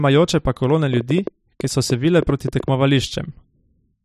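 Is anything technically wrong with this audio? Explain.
Yes. From 0.93 to 2.69 s, just after "pa kolone", a train of clicks: about fifteen unevenly spaced ticks, around 7.5 per second, standing roughly 10 dB above the speech. The likely cause is interference from nearby equipment or a faulty connection or power supply.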